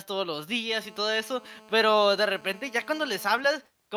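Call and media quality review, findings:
GSM phone buzz, 0.70–3.41 s. Hard, raspy 217 Hz buzz with dense harmonics under the speech, about 25 dB below it. Steady throughout. Nearby 2G handset in a call; its radio bursts get rectified in the analogue input stage.

GSM signalling bursts, 3.44–3.92 s. Faint even ticks with a longer 217 Hz buzz twice a second, roughly 35 dB down. Nearby 2G handset in a call, talker silent, sending only sparse burst groups. Input circuitry demodulates each group into an audible click.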